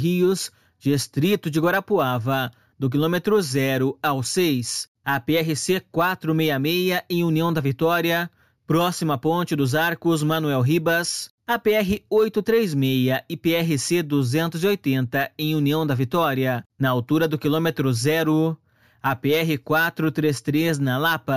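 Throughout the audio, a sample-and-hold upsampling stage repeated each sample without a smoothing filter, apparently from a 16 kHz rate to 48 kHz, leaving imaging: a mirrored copy between 8 and 16 kHz, about 19 dB down, heard as a metallic fizz that tracks the level and moves against the pitch.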